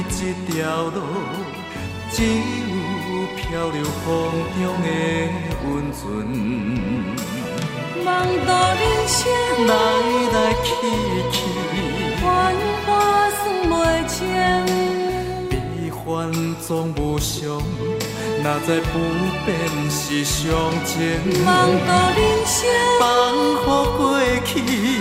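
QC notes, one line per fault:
No faults were found in the clip.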